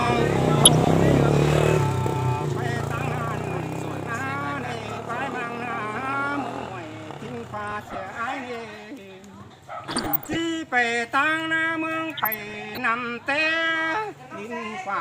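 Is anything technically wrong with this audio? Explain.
Yes. DAB burbling occurs at 0.63–0.94, 3.27–3.39, 5.95–6.14, 7.61–7.95, 9.84–10.4 and 12.17–12.83 s. Bit errors of a fraction of a percent slipped past error correction into the MP2 data, so individual sub-bands pick up blips of noise or jump in level, producing watery, bubbling disturbances in the sound.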